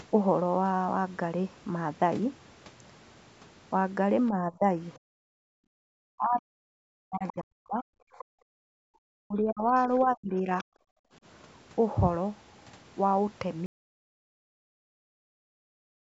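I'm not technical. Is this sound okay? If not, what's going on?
No. Four kinds of problem can be heard.

Speech suppressed in double talk, from 4.36 to 4.68 s and again from 6.08 to 10.66 s: the talker's voice sinks, goes dull or breaks into pieces, briefly at first, then for about three seconds in total during the longer stretch, where it nearly vanishes at its worst. The likely cause is that the other person on the call was speaking at the same moment, and the call's echo canceller, unable to tell the two apart, turned both down.

Background gated by the echo canceller, at 4.99 to 5.8 s, 8.25 to 8.45 s and 10.8 to 11.13 s: the quiet room sound between words suddenly drops away almost completely, then returns. This happens because the echo canceller hears the loudspeaker playing and shuts the microphone down hard for a moment, releasing it once the loudspeaker goes quiet.

Other side's voice leaking through, from 7.28 to 8.25 s and from 9.78 to 10.64 s: a second, quieter voice can be heard under the talker, fainter in the second stretch. 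The likely cause is that the talker's device plays the other person aloud through its loudspeaker, the microphone picks that up, and the echo canceller fails to remove all of it.

Audio dropout to silence, from 13.66 s to the end: the sound cuts off in mid-flow and is followed by dead silence with no room noise at all. This points to the audio input likely being lost, through a disconnected device, a failed link or an accidental mute, while recording carried on writing silence. Whatever came after that point is gone.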